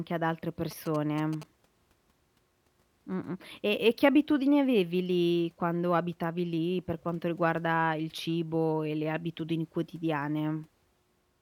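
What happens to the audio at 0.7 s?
Right after "ad altre", GSM signalling bursts intrude from 0.71 to 1.44 s. A nearby 2G handset's intermittent radio bursts get rectified in the audio circuitry, producing a galloping dit-dit-dit of short 217 Hz buzzes roughly 15 dB below the speech.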